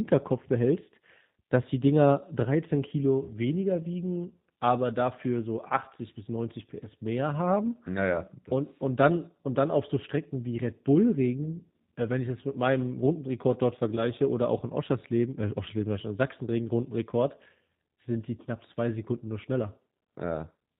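Throughout, the speech carries G.729 codec coloring at a rate consistent with 8 kbit/s. Nothing above 4 kHz survives, and the pulse-based excitation over a pitch predictor and vocal tract filter leaves the voice plainly rough and synthetic.

VoIP packet loss concealed by the speech codec occurs at 8.13–8.20 s, at 11.44–11.64 s just before "äh wenn ich das", and at 13.96–14.04 s just before "oder auch in". Each dropout fits a single lost 10 ms frame. The decoder extends its last pitch and filter into a brief buzzy tone or coloured noise that fades, and the voice stays weakened until its state recovers.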